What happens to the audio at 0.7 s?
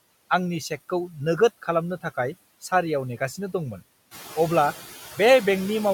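At 0.7 s you're hearing noise suppressor artifacts, which run through the whole clip: steady background gets pushed down about 16 dB frame by frame, so the noise sinks between the words and rises under them.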